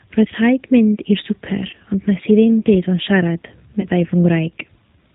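G.729 coding runs through the whole of this speech recording, and its damage is plainly audible. The sound is rebuilt from a vocal-tract filter, a pitch predictor and a few pulses per frame, which fits the 8 kbit/s Annex A variant. Nothing above 4 kHz survives, so the speech sounds dull and band-limited, with a rough, slightly synthetic edge where the sparse pulse excitation cannot follow the real waveform. VoIP packet loss concealed by the speech codec occurs at 1.71–1.75 s and again at 3.81–3.85 s. Each event fits a single lost packet carrying 20 ms of audio. For that span the decoder keeps extending its last pitch and filter settings at falling gain, so the sound smears into a brief buzzy tone or coloured noise that fades. Because each frame depends on the one before it, the weakened or distorted quality lasts beyond the missing 20 ms, stretching each disturbance to roughly 40–50 ms before the decoder recovers.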